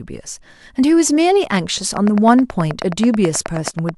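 From 1.97 to 3.90 s, ticks at a regular 9.4 per second sit well above the speech, a train of clicks likely from electrical interference.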